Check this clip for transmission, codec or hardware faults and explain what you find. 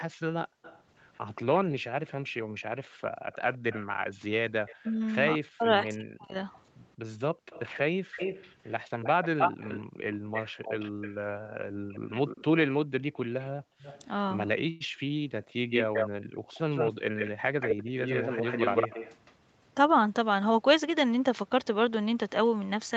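Several call-path faults are audible in this speech clip, layered over the band limit at 8 kHz that the call's codec and microphone processing impose normally.

Echo leak, 0.00 to 19.34 s: a second copy of the voice trails the original by 177 ms and sits only about 5 dB below it. The likely cause is a far-end echo canceller letting loudspeaker pickup through and sending it back. Unlike room reverberation, which smears into a decaying tail, this is a distinct, delayed repeat at one fixed lag, so the speech sounds doubled rather than roomy.

Background gated by the echo canceller, 0.46 to 3.32 s and 7.34 to 16.51 s: the room tone ducks by up to about 40 dB in short bursts, roughly half a second in total in the first span and about two seconds in the second. The canceller clamps the microphone while the loudspeaker plays and releases it afterwards. What sets this apart from double-talk suppression is that the voice stays intact and only the ambient floor pumps in and out.

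Speech suppressed in double talk, 4.83 to 6.35 s: here the talker's own voice is pushed down very deeply, for around a second in total. With both sides talking, the canceller likely could not separate local speech from echo and attenuated everything. The difference from gating is that the speech itself drops out, not just the background between phrases.

Call audio freeze, 14.69 to 14.82 s: for about 110 ms the last sound is stretched into a brief continuation instead of cutting to silence, then the speech resumes exactly where it stopped. This fits a jitter buffer that ran empty while packets were likely held up in transit. Unlike packet loss, nothing is skipped. A gap is inserted and the delay grows by 110 ms.

Jitter buffer speed-up, 16.72 to 18.41 s: the speech runs at 105% of normal rate with unchanged pitch, and around a tenth of a second is trimmed out across the stretch. The receiver is cutting pitch-period-sized slices to shrink a backlog in its buffer. 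A resampling error would raise the pitch as well. Here only the pace tightens, giving a slightly hurried delivery.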